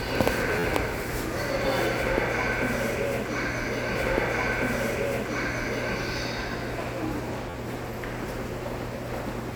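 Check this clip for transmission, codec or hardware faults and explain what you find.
Two brief repeated-buffer faults occur, at 0.59 to 0.64 s and 7.50 to 7.54 s. New audio arrived late, so the device replayed its last 11.6 ms block, which fits a 512-sample buffer, four and then three extra times. Each gives a short buzzy stutter with hard joins.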